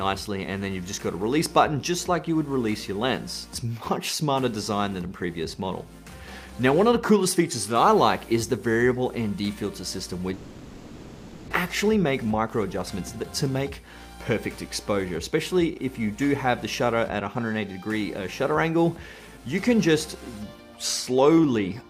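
A long network dropout is the likely cause of the break from 10.33 to 11.52 s: incoming audio stopped arriving, so the receiver had nothing real to play and filled the gap by carrying the last sound forward. For about 1.17 s this concealment comes through as a buzzy, hissing continuation that fades without ever going fully silent. When the audio resumes, about a second of material is gone. This jump also leaves the playback running roughly 150 ms later than before. Right after, from 11.66 to 13.25 s, a jitter buffer speed-up works off that built-up delay. With more audio queued than its target, the receiver repeatedly cuts out short pitch-period-sized pieces, trimming around 150 ms in total. Playback runs at about 109% of normal speed while the pitch stays the same, so this stretch sounds hurried and slightly rushed before settling back to normal pace.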